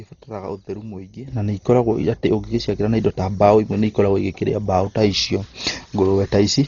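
From the first moment the speech sounds dull and hemmed in, with nothing above about 7 kHz and a rough, fluttery haze clinging to the voiced sounds. That's heavy damage, most likely from Dolby Digital compression pushed down to something like 32 kbps. At that rate the encoder trims the top of the band and leaves many frequency lines with no real detail, so the decoder fills them with noise, and you hear that grainy shimmer.

Then at 1.28 s the whole thing leaps up by about 12 dB in one step and stays there to the end. Speech and background noise rise together, with no fade, which points to a sudden gain jump, likely a digital gain change or bit shift applied on a single sample without any ramp.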